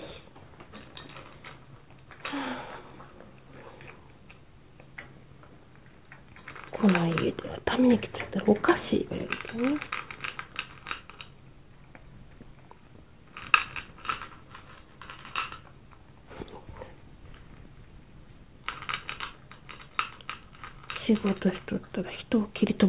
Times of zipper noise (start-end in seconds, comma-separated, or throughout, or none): none